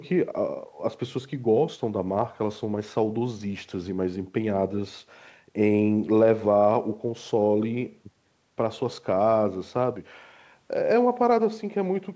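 A speech clip with nothing technically wrong with it.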